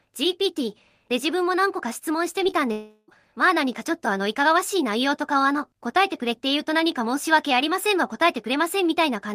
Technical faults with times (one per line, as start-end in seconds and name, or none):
2.43-2.54 short concealed packet loss
2.72-3.10 long network dropout